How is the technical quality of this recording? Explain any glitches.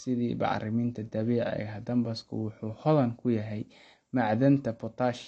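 The speech carries plainly audible codec damage from start to finish. Throughout, likely AAC compression at a starved bitrate, suggesting roughly 32 kbps, discards content above 8.5 kHz and coarsely quantises the rest, leaving the sound dull, smeared and warbly.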